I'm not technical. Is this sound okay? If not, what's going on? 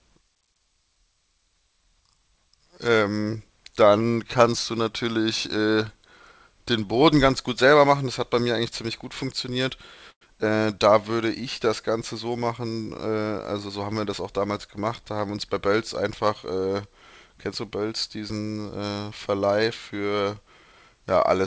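No. There are two short problems in this speech recording.

At 10.11 to 10.23 s the sound briefly stalls. This is a call audio freeze. The likely cause is that pieces of the call's data arrived late, so the receiver ran out of sound to play. It filled the wait with a fading continuation of the last sound, then most of it went quiet for 0.08 s. When the data arrived, the speech carried on where it left off. Nothing was lost. A small gap was added.

From 13.69 to 14.50 s the speech sounds slightly rushed. This is a jitter buffer speed-up. The receiver had built up too much waiting audio. To catch up, it cut out many tiny slices, about 70 ms in total. The speech plays about 8% faster, but the pitch stays the same, so the voice doesn't sound higher. It just sounds hurried.

The call system itself caps the sound at 8 kHz, which takes off some crispness.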